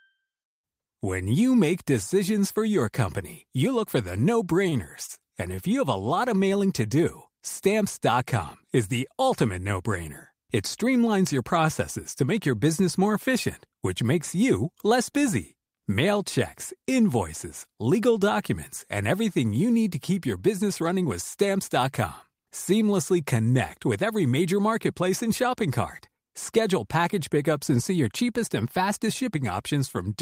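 At 4.69–4.74, 5.06–5.11, 5.15–5.19 and 5.56–5.60 s the speech briefly hangs, each sound held slightly too long with a faint buzzy smear. These are short stalls from a late packet: the jitter buffer ran dry, so the receiver stretched the last audio for 21 to 28 ms, then resumed where it had stopped with nothing lost.

From 20.33 to 21.05 s the speech sounds hurried, running about 8% fast while the pitch stays unchanged. This is a jitter buffer speed-up: with more audio queued than intended, the receiver trimmed many short pitch-period slices, around 70 ms in total, to bring the delay back down.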